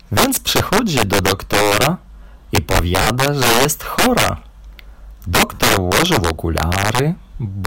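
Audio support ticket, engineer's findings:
Integer overflow throughout. Violent cracks on loud peaks, far sharper than clipping. Gain stage about 11 dB over full scale; a few percent of samples wrap to opposite sign.

Lost LE Audio frames at 0.46 s, before "do doktora i", and 3.02–3.07 s, between "do doktora i" and "że jest chora", and 5.54–5.59 s. 10 ms and 50 ms gaps, fitting one and five LC3 frames. Concealment smears tones into noise.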